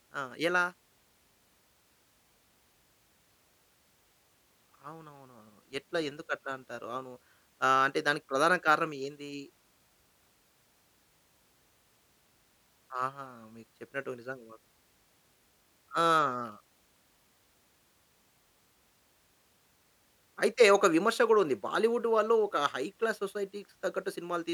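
No technical faults occur at any point in the speech, so there is nothing to describe in time order.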